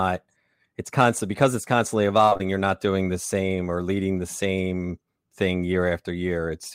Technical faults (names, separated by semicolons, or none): repeated packet loss (robotic sound)